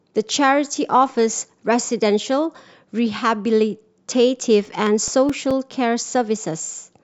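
Speech with CD scratch ticks: eleven short clicks or micro-dropouts recur at a steady rate of nearly five per second between 4.22 s and 6.36 s, each only a few milliseconds long. A scratch on the disc corrupts more data than error correction can repair once per revolution, so the player interpolates or mutes those samples. On a spectrogram they form evenly spaced thin vertical broadband lines; the waveform shows matching brief notches or glitches.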